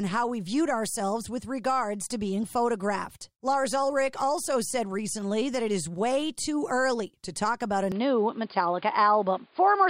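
A speech recording that abruptly turns duller and boxier at 7.92 s and stays that way to the end, with no gap at the change, most likely an input switched to a poorer device. On a spectrogram, energy above 4.9 kHz vanishes, the level shifts by roughly 5 dB, and a new noise floor appears about 35 dB down.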